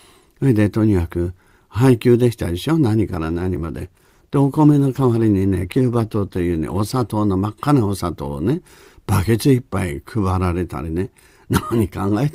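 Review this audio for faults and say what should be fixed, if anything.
The adaptive stream fell back to a lower bitrate from 3.03 to 7.03 s as the connection slowed. The speech abruptly turns worse, with heavier codec artefacts and no gap, which fits Opus dropping from 64 to 16 kbit/s. More client buffering or a steadier connection would keep the stream at its higher rate.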